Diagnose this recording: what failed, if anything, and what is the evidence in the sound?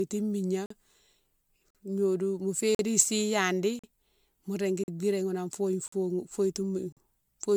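Codec stage: the speech sounds swirly, hollow and smeared, with blurred consonant onsets. That's likely generation loss from about ten MP3 re-encodes near 130 kbit/s.

Playback or buffering stage: a gap between chunks. There are 44 ms holes every second, at 0.66, 1.70, 2.75, 3.79, 4.84, 5.88 and 6.92 s.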